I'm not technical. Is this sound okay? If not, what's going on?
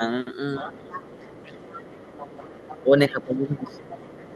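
No. From 0.58 to 2.83 s and again from 3.57 s to the end, a faint second voice sits underneath. That is the other side's voice leaking through, likely from this talker's loudspeaker reaching this microphone.

The main voice also dips at 0.59–0.93 s, briefly at 2.83–2.92 s, and for about a second at 3.09–4.04 s. That is speech suppressed in double talk, likely the echo filter turning everything down while both spoke.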